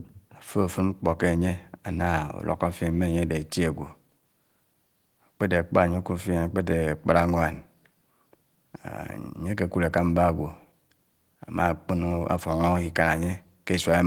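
No technical faults can be heard anywhere in this speech clip. The Opus voice compression keeps the full band, with content reaching about 20.2 kHz, and leaves only a light coding texture that fits hybrid-mode Opus at around 20 kbps.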